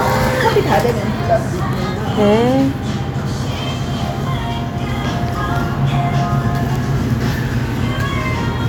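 Everyday sounds, with no technical faults to report.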